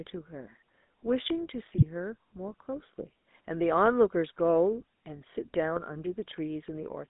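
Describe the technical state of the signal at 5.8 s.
GSM bit errors hit from 5.76 to 5.82 s, a burst of about 60 ms that fits roughly three corrupted codec frames. Flipped bits reached the decoder and scrambled the values it uses to rebuild each frame: the vocal-tract filter, the pitch period and the gain. With those parameters wrong, the spectrum bends out of shape and the level jumps, so the sound briefly breaks into a gargling squawk with a sharp pop before recovering.

Underneath, the GSM full-rate codec colours the whole clip, including this moment, with plainly audible damage whose character fits a 13 kbps full-rate stream. The codec rebuilds speech from a vocal-tract model driven by a sparse, regularly spaced pulse excitation, which gives the voice a buzzy, gravelly roughness. The line band runs from 200 Hz to 3.7 kHz, so the sound is thin, lacking both low body and upper brightness.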